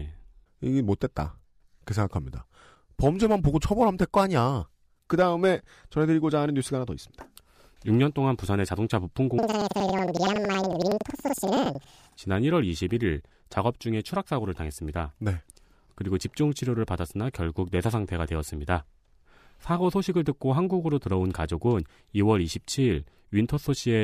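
Speech clip. From 9.38 to 12.21 s, planar audio read as interleaved: each 93 ms block plays twice at double speed, raising pitch an octave with a 10.8 Hz flutter. Unlike a sample-rate error, the pace stays normal.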